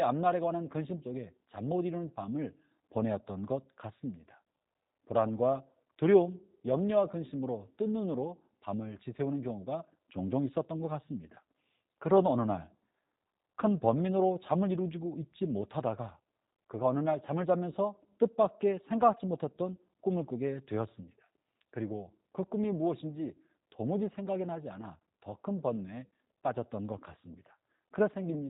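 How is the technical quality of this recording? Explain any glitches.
The recording has clearly audible codec damage from start to finish. The speech sounds narrow, slightly rough and buzzy, with a synthetic edge and nothing in the top end. That is G.729 codec coding. Instead of storing the waveform, the codec models each 10 ms slice as a vocal tract filter excited by a pitch predictor and a few pulses, which fits an 8 kbit/s stream. The rebuilt speech stays intelligible, but the coarse excitation leaves the roughness, and nothing above 4 kHz survives.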